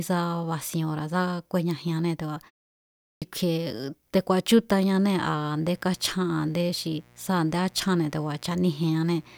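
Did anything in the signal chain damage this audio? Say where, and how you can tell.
Yes. At 3.08 s the speech resumes abruptly out of silence, with roughly 0.14 s of its onset missing after a 0.66 s pause. This is a clipped start after a pause at the playback stage: the output device dozed during the gap and needed time to wake before passing sound again.

From 4.92 s to the end, a steady, raspy mains buzz sits roughly 30 dB under the speech. It is built on 60 Hz harmonics reaching into the kilohertz range. This points to the analogue wiring, where switching spikes from a dimmer or rectifier, or a missing shield, leak in twice per mains cycle.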